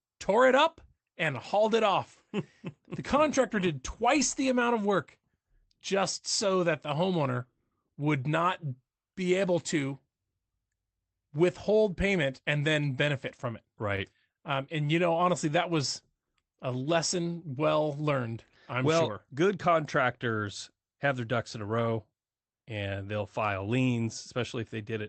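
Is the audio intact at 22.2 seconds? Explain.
Yes, the speech at 22.2 seconds is intact, with no fault at that moment.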